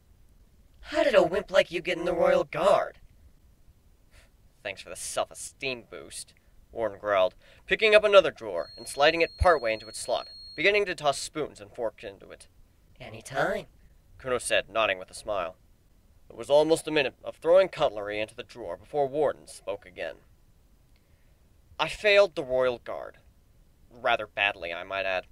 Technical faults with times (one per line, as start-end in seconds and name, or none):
8.52-10.69 feedback whistle